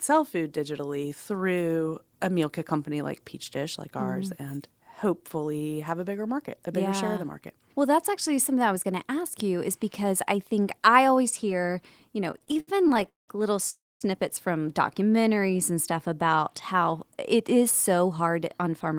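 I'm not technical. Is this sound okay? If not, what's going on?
No, there are four separate glitches in this speech recording, all typical of audio sent live over a network, like a call.

Repeated stalls (stutter), from 12.31 to 13.30 s, right after "always hear you know". In that one second the sound catches 18 times, the longest catch lasting about 0.19 s. The pieces of sound kept arriving late, so the receiving end ran out of audio again and again. Each time it stretched out the last bit of sound while it waited. Nothing is lost, but that stretch drags and stammers.

Call audio freeze, from 13.70 to 14.03 s. The sound hangs for about 0.31 s, and most of that, about 0.23 s, is silence. Then it picks up exactly where it left off. This is likely a brief hold-up of the incoming audio, with the receiver filling the wait. A pause has been inserted, but nothing has been cut out.

Jitter buffer slow-down, from 15.09 to 16.16 s, just before "how it is". 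Here the speech plays at about 90% speed, adding roughly 0.11 s, while the pitch stays the same. The receiver was running short on stored audio. To build a reserve, it repeated tiny slices of the sound many times, so sounds come out drawn out.

Jitter buffer speed-up, from 18.05 to 18.94 s, just after "how it is". This is the opposite fix. The receiver had stored more audio than it wanted, so it snipped out tiny slices, a small fraction of a second in total. The speech runs at about 108% speed with unchanged pitch and sounds hurried.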